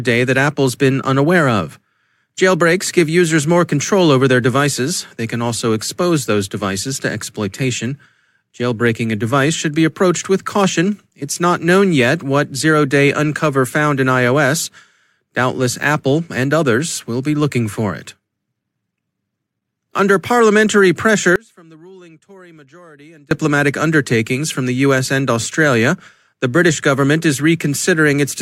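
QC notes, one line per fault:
21.36 to 23.31 s, audio dropout to a faint residue: the speech cuts out abruptly for about 1.95 s and returns mid-flow on "undertakings from the". The gap is not silent but holds a faint sound, roughly 30 dB below normal level, so the path stayed live while the wanted signal was lost. The likely cause is a brief break in the feed upstream, with the hard edges setting it apart from a natural pause or fade.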